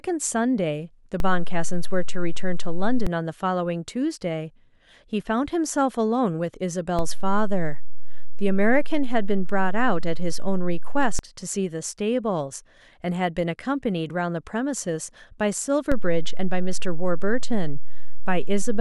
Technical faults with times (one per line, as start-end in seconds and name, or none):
1.20-3.07 DC step
6.99-11.19 DC step
15.92-18.80 DC step